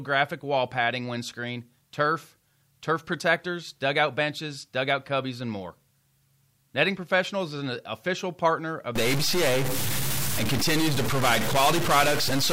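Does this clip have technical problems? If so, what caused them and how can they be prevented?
Yes. A stuck bit runs from 8.96 s, right after "an official partner of", to the end of the clip. The sound turns harsh and buzzy, and the gaps between phrases fill with noise instead of silence. The likely cause is one data line in the converter or its wiring held fixed, so about half the samples are pushed off by that bit's step, roughly -20 dBFS. Checking converter connections and running a bit-pattern test before recording prevents it.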